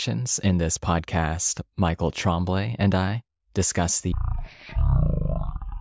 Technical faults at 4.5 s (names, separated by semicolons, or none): wrong sample rate